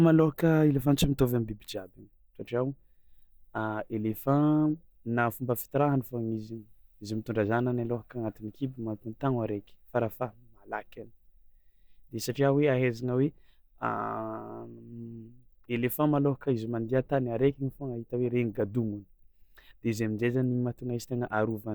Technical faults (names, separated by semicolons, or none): none